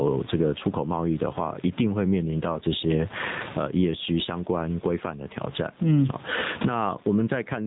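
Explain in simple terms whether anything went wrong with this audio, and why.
Two things went wrong, and both run through the whole clip. First, gain pumping: loud and soft parts end up closer in level and the sound is squashed, likely a mic gain set far too high with a fast limiter clamping it down. Second, the AMR narrowband mobile codec, the old phone-call speech codec: everything above 4 kHz is gone, and the voice sounds clearly buzzy and synthetic, the way it does when the codec runs short on bits.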